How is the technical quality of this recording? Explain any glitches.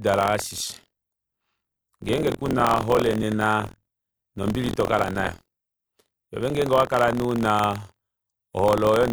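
The recording is marred by buffer tearing that runs the whole way through the speech. The program filling the playback ring buffer and the hardware reading it have drifted so they cross inside every period, leaving about a tenth of each buffer holding audio from roughly 50 ms earlier, with hard joins at both edges. That gives a robotic 43.1 Hz rattle, which fits a 1024-sample buffer, heard only while sound is present.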